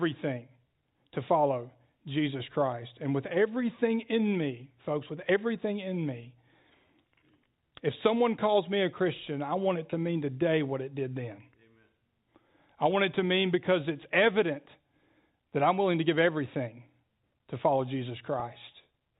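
At 9.90 to 9.92 s and again at 18.40 to 18.42 s, packet loss with pitch repetition breaks into the speech. Each 20 ms gap, which fits a single lost packet, is bridged by repeating the last pitch period, so the sound briefly holds with a slight buzz instead of dropping out. The G.711 telephone band, with nothing above 4 kHz, carries through both.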